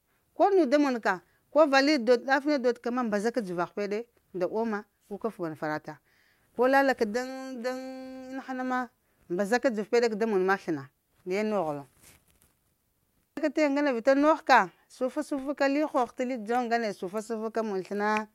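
No technical faults occur at any point, so there is nothing to describe in time order.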